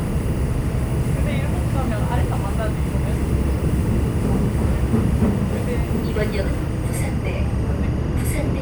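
From start to finish, timecode bleed runs under the sounds: linear timecode from an adjacent track or cable has leaked into the audio path. Its square-wave code flips between tones around 1 kHz and 2 kHz, giving a steady chirping warble roughly 25 dB below the wanted sound. The pattern cycles about 24 times a second, which fits 23.976-frame code. On a spectrogram it shows as unbroken horizontal bands near 1 and 2 kHz with fine periodic texture.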